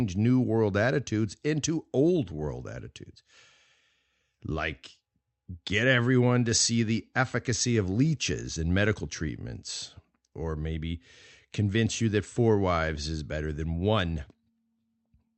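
Nothing goes wrong anywhere in this speech recording; it just sounds like a regular call coming through an Opus-style call path, with the top end rolling off around 8 kHz.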